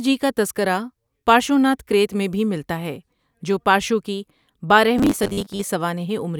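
From 4.99 to 5.63 s the speech collapses into a stiff, metallic buzz at 100 Hz that only loosely follows the words. This is robotic sound from repeated short buffers, likely caused by audio arriving too seldom, so a 10 ms slice is replayed to fill the gaps. About half of the stretch is repeats, and the real audio in those gaps is skipped.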